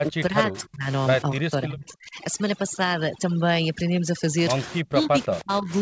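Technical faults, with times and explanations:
0.00–0.86 s, 1.39–2.17 s and 4.81–5.71 s, speech suppressed in double talk: the echo canceller was likely confused by both ends talking at once, mistaking this talker for loudspeaker echo and attenuating the whole signal. In each span the speech dips or breaks up in patches totalling about half a second. The drop deepens across the clip, from about 20 dB in the first span to about 35 dB, then about 40 dB in the last.
1.22–4.38 s, overdone noise removal: the noise suppressor is set too aggressively and gates individual frequency bands whenever they sit close to its noise estimate. The room noise, which sits about 15 dB under the speech, is what it is working against. Quiet speech components are removed along with the noise. The background collapses to near silence sprinkled with twinkling artefacts, all within the 8 kHz band of the G.722 call path.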